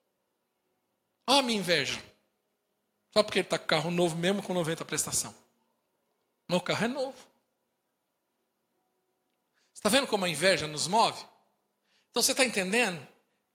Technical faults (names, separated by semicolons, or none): none